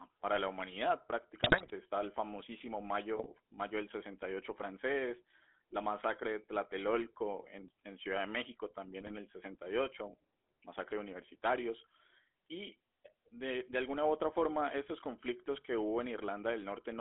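Throughout, the speech passes through a GSM full-rate codec that rebuilds the voice from coarse pulse excitation within a 250 Hz to 3.4 kHz band, leaving a plainly buzzy, gravelly roughness. GSM bit errors corrupt the decoder's filter, pitch and gain values from 1.40 to 1.71 s after "para la humanidad", from 3.16 to 3.27 s between "el famosísimo" and "mayo del", and from 9.00 to 9.13 s, breaking the voice into squawks, pops and gargling.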